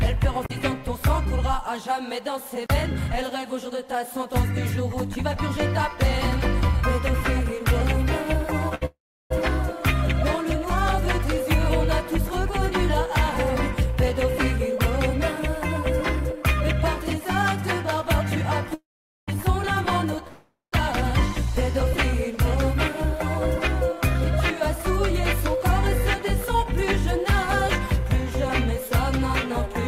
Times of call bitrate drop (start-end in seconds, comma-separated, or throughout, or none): none